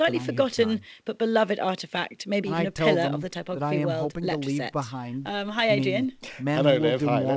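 No technical faults can be heard anywhere in the speech. It has gone through a WebRTC call path working normally, and the sound tops out at 8 kHz, which fits a wideband call codec such as G.722.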